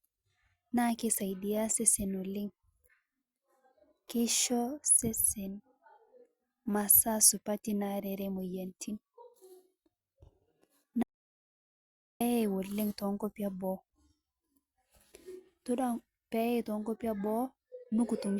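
At 11.03 s the speech cuts out abruptly. Complete silence follows until 12.21 s, about 1.18 s, with no room tone. This is an audio dropout to silence. The input was likely lost and zeros were written. Speech resumes at "oleng' tenkopii eboo".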